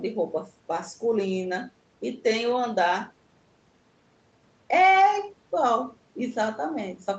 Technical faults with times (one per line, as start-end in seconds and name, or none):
none